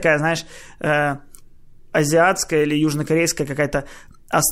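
No technical faults are audible.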